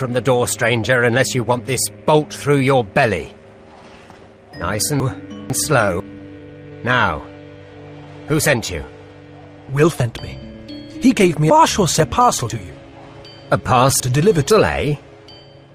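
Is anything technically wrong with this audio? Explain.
Yes, there are three related timing faults.

Clock drift between sender and receiver runs through the whole clip. Small hiccups and a faintly unsteady pace recur at uneven intervals. The sender's clock runs slow, by roughly 2 percent, so the receiver's jitter buffer keeps draining. The receiver has to make up the shortfall over and over. That constant mismatch is the root of the next fault.

Repeated timing corrections span 0.03 to 15.68 s. They sound like tiny stutters where a fragment seems doubled, and the playback feels fractionally slower, at about 98 percent speed. Because the slow sender keeps falling behind, the receiver keeps repeating short slices to fill the gap, always in the same direction but spaced irregularly. Altogether these repeats add roughly 0.4 s to the stream.

Chunks out of order appear three times: 5.0 to 6.0 s, 10.0 to 12.0 s, and 12.5 to 14.5 s. 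Each is a jumbled, garbled moment with hard joins. In each case a 500 ms chunk was delivered late and played after material that should have followed it. In the first case it is one chunk late, and in the later two it is three chunks late.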